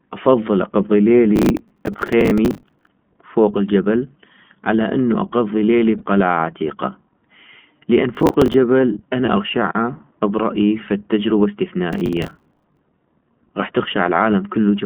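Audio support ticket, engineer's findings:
Narrowband, slightly rough and synthetic speech throughout, nothing above 3.4 kHz and little below 150 Hz. iLBC codec damage plainly audible. Fits the 20 ms frame, 15.2 kbps mode.

Gritty crackle bursts at 1.36 to 2.87 s, 8.15 to 8.54 s, and 11.93 to 12.79 s. Processor overload crackle. Dozens of missed deadlines on buffers of about 10 ms, each replaying hard-edged old audio.

Brief held, buzzy smear at 5.98 to 6.02 s, 9.26 to 9.29 s, and 14.04 to 14.06 s. Lost iLBC frames. One 20 ms frame lost each time, concealed by the decoder repeating the last pitch cycle with noise. Speech recovers immediately.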